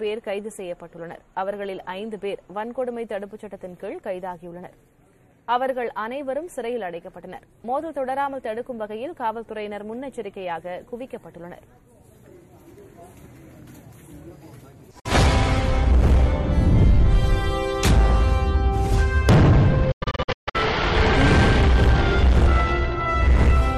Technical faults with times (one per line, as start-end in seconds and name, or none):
14.99-15.06 digital broadcast dropout
19.91-20.55 digital broadcast dropout